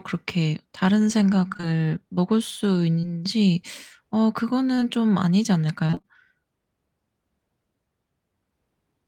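A speech clip with two kinds of network damage. Short concealed packet loss occurs at 1.53 to 1.65 s, 3.01 s, and 4.75 to 4.83 s, where 20 ms holes, consistent with 20 ms packets, were patched by extending the preceding sound. These show as brief smears, with harmonics stretched flat and onsets blurred on a spectrogram. Repeated packet loss (robotic sound) spans 5.87 to 6.19 s, where holes no longer than 20 ms arrive in quick succession and nearly half the stretch is concealed. That produces a choppy texture with pieces missing, visible as a run of smeared, repetitive patches and uneven waveform envelope across those three tenths of a second.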